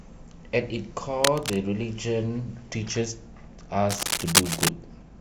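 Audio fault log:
1.24–1.56 s and 3.89–4.69 s, cable scratch noise: a worn cable or connector likely shifted, its contact resistance jumping rapidly, so dense uneven bursts of scratching noise sit over the speech, about level with it in the first burst and noticeably louder than it in the second.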